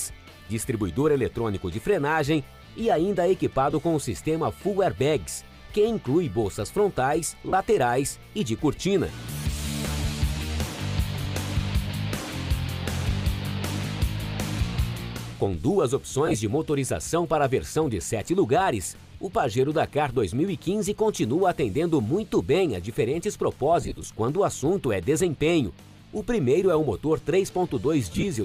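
Short noisy smears break into the audio at 3.71, 7.49, 11.24, 16.26, 23.81 and 28.12 s. The last three are scattered bursts spread over 75 to 225 ms. These are lost LE Audio frames, where the LC3 decoder covered each gap by replaying the previous spectrum with random signs.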